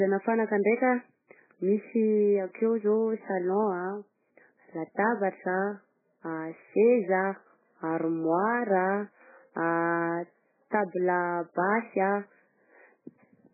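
Throughout, the speech sounds dull, watery and swirly, with nothing above 2.5 kHz. This is likely heavy MP3 compression at a very low bitrate, discarding the treble and weak frequency lines.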